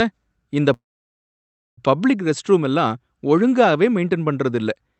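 From 0.73 to 1.80 s a call audio freeze halts the speech: a brief fading buzz, then near silence, likely from delayed packets draining the jitter buffer. Speech resumes intact, about 1.04 s late. The waveform shows a flat gap; the spectrogram shows a short smeared tail, then blankness.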